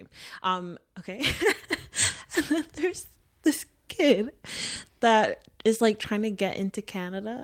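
No technical faults are audible.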